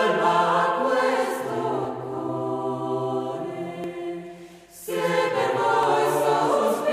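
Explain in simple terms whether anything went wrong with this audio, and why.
The music skips very slightly at 3.84 s and again at 5.83 s, a tiny jump where a sliver of sound vanishes. This is audio missing between chunks, likely from recording in two-second pieces and losing a moment at each join.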